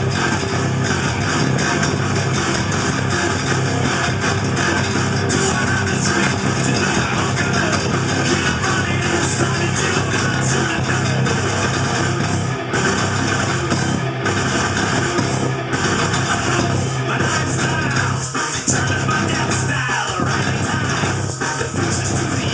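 From start to finish, small timing hiccups recur at uneven intervals. This is clock drift between sender and receiver. The sending device's audio clock runs about five percent faster than the receiving one. Audio therefore arrives faster than it is played out, and the jitter buffer keeps filling. To stop it overflowing, the receiver drops short pieces of audio. Each drop is heard as a tiny skip or jump, with the sound lurching slightly forward.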